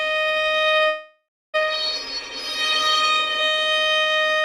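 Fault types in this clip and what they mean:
Call audio freeze: from 0.87 to 1.56 s the sound stalls, the last moment carrying on as a fading buzz or hiss that sinks into about 0.31 s of silence before the audio resumes exactly where it stopped, likely because packets were held up and the jitter buffer ran dry. Unlike a packet-loss dropout, nothing is skipped; roughly 0.66 s is inserted, so everything afterward arrives that much later.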